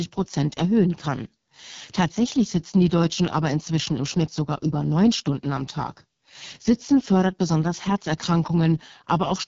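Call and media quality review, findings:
Rough, raspy speech across the whole clip, 0 to 9.5 s; no content above about 7.2 kHz. Probable component: AMR wideband (HD Voice) codec, the roughness pointing to its lowest mode, around 6.6 kbit/s. Mechanism: the pulse-excited vocal tract model is starved of bits, so the excitation turns buzzy and grainy, and noise fill stands in for the top band. Differs from narrowband AMR by the band edge near 7 kHz rather than 3.4 kHz, and from packet loss by being continuous, with no dropouts.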